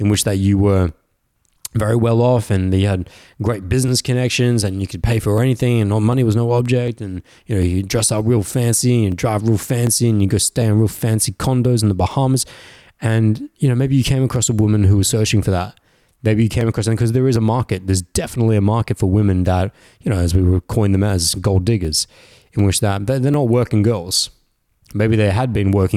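Throughout this speech clip, from 0.14 s to 25.58 s, a click recurs every 0.75 s, about forty in all, audible wherever speech is present. The likely cause is clock drift buffer slips: two devices disagree by roughly a thousand parts per million, so every so often a block of a few tens of samples is dropped or repeated. A spectrogram shows evenly spaced thin vertical broadband lines; the waveform shows matching discontinuities.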